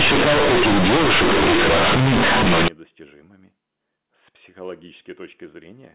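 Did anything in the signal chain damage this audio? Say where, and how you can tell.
Yes. From 0.0 to 2.68 s, companded audio read as linear: sample-format conversion played A-law bytes as plain 8-bit samples. Quiet passages and pauses are as loud and buzzy as peaks, which overload clipping would not do.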